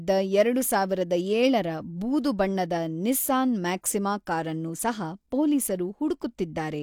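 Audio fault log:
No faults are heard in this speech recording. There is nothing here to log.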